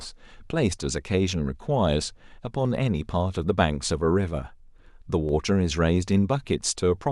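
A handful of samples likely went missing from the stream at four points, so the waveform jumps abruptly to a later value, a tiny fraction of a millisecond lost each time. In this speech it is heard as a single sharp click at 1.29 s, 2.85 s, 5.29 s and 6.58 s.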